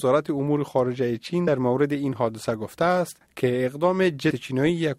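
At 1.47 s, compressed frames are skipped: a short run of coded audio never plays, so the sound jumps ahead by roughly 70 ms, about three 23.2 ms frames.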